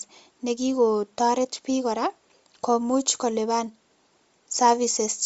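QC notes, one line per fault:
Throughout, Bluetooth LC3 compression (likely): the speech has no content above 7.7 kHz and carries a breathy, grainy edge with plainly audible codec damage. This comes from a transform codec working at a low rate, consistent with 32 kbps and 10 ms frames. Too few bits reach the upper spectrum, so much of it is zeroed and refilled with shaped noise. That substituted noise replaces the real fine detail and produces the rough, hissy texture.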